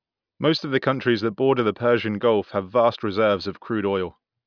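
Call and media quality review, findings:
No audible faults found in this speech clip.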